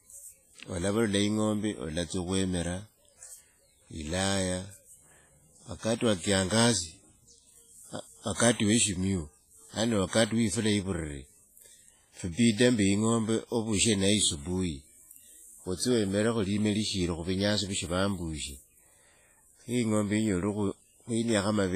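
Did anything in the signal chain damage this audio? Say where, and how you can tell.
Yes, at the codec stage: the speech runs throughout through what is likely WMA compression, heavily damaged, with nothing above 15.4 kHz, which fits a low bitrate near 24 kbps. Long transform blocks smear quantisation noise around each syllable and drop weak components, leaving ringing, washy hiss.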